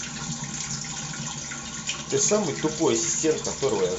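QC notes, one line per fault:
No faults found on the speech track; nothing to log.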